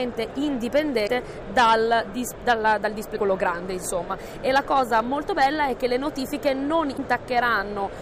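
At 1.03 to 1.09 s, 3.12 to 3.18 s and 6.94 to 6.99 s the audio breaks into a short glitch of about 55 ms each time, caused by damaged data in a compressed stream. Corrupted bytes make the decoder misread those frames and lose sync until it finds the next valid frame header. Each event is a brief disruption in the audio.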